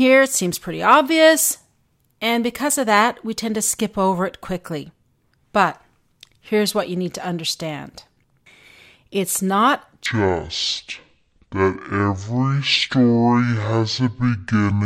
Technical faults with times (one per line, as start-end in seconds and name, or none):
10.06-14.85 section at the wrong speed